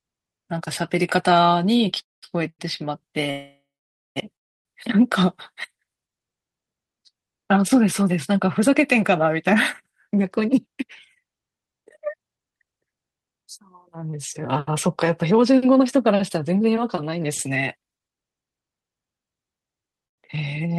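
At 1.99 to 2.38 s, 3.31 to 4.18 s, 4.36 to 4.67 s and 20.07 to 20.20 s the speech halts in a call audio freeze. The last sound trails off into silence, for up to about half a second in the longest, then resumes where it stopped. This is likely a jitter buffer running empty while packets were held up.

From 2.50 to 2.61 s there is a short stall from a late packet. The receiver stretched the preceding sound by 93 ms while it waited, so that sound is held too long before the speech picks up again without loss.

Between 10.24 and 16.69 s a jitter buffer speed-up runs the speech at 109% of normal speed with its pitch unchanged. Short pitch-period slices, about half a second in total, were cut to shed excess buffered delay. The passage sounds hurried.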